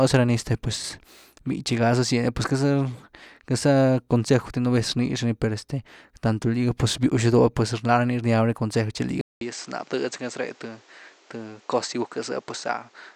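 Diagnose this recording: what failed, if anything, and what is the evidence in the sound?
At 9.21 s the speech cuts out for 200 ms, then returns duller and a little quieter, roughly 5 dB down, with nothing above 8.5 kHz and a new noise floor about 30 dB below the voice that continues to the end. The likely cause is an input switched to a poorer device at the driver stage: the system changed microphones mid-recording, and the replacement's narrower band, different gain and own hiss replaced the original capture.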